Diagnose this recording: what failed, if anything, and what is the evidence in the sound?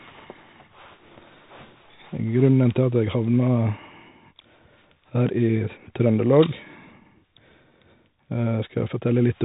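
The failure is at the codec stage: the whole speech clip went through the Bluetooth CVSD headset codec, with plainly audible damage. A spectrogram would show energy ending flat at 4 kHz, with granular hiss filling the gaps. Loud peaks smear where the one-bit delta steps can't keep up, and s sounds turn scratchy, which fits a 64 kbps narrowband headset link.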